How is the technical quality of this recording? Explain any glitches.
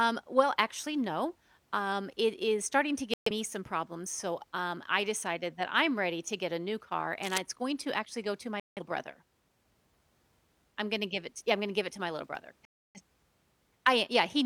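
The recording has two kinds of glitch: three digital broadcast dropouts and one burst of cable scratch noise.

Digital broadcast dropouts occur at 3.14–3.31 s, 8.60–8.82 s and 12.65–13.01 s. The receiver stopped getting usable frames and muted until clean ones returned, so the speech cuts to silence for about 128 ms, 171 ms and 299 ms. That points to a few frames lost each time, and whatever was said in those gaps is gone.

Cable scratch noise appears from 7.23 to 7.38 s. A worn cable or connector being moved likely made its contact resistance jump about rapidly. The result is a dense, ragged scratching burst laid over the speech, only a little quieter than the speech itself.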